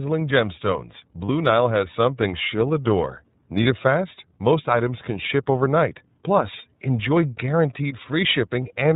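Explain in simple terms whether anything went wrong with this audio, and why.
The speech went through the iLBC codec, a phone-quality voice coder that drops everything above 4 kHz, so the voice sounds muffled, slightly rough and synthetic throughout.

Lost iLBC frames happened twice, at 1.27 to 1.30 s and at 3.63 to 3.67 s. Each time, one 30 ms chunk went missing and the decoder briefly held a buzzy vowel-like sound before the voice snapped back.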